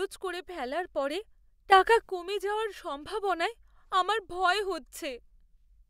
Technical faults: sudden gain jump

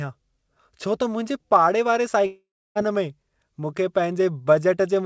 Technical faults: long network dropout

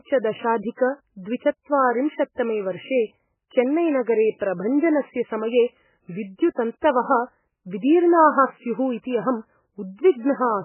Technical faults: MP3 compression

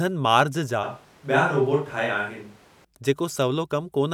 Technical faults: switch to a distant microphone

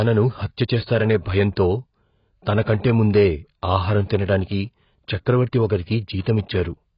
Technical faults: AAC compression

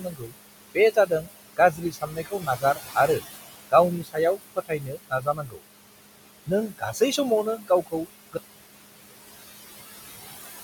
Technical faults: noise suppressor artifacts; speech cut by the noise suppressor; audio dropout to silence

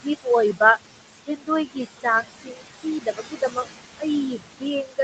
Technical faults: noise suppressor artifacts; speech cut by the noise suppressor

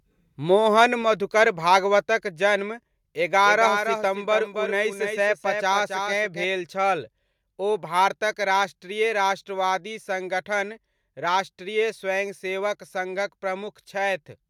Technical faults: microphone volume stepped down; doubled audio track

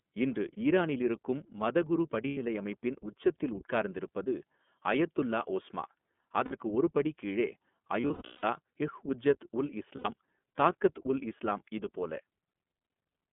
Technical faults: iLBC codec; lost iLBC frames

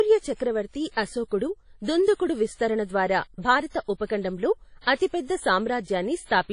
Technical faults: WMA compression

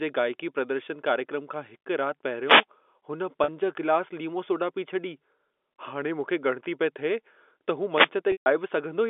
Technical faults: wireless microphone noise hit; packet loss with pitch repetition

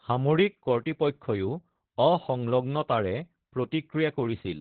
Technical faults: Opus voice compression

